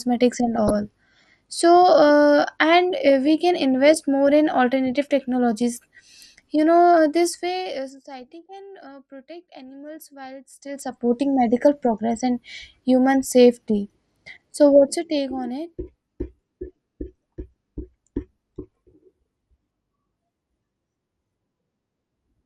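Throughout the speech, the sound is dull, with a gurgling, granular edge. This is likely MP2 compression at a rate that fits about 80 kbps. Too few bits leave upper sub-bands switched off or flickering, and the remaining bands are coarsely quantised.

From 0.56 to 0.72 s, and again briefly at 11.94 s, short blips of noise break over the speech. This is DAB burbling. A small share of bit errors slipped past error correction. Corrupted samples put short blips of noise into single sub-bands.

From 14.68 to 15.29 s, a fast ticking rides on the speech as the level drops by about 10 dB. This is zipper noise. The gain moves in unsmoothed steps, roughly a hundred per second, and each step leaves a tiny click.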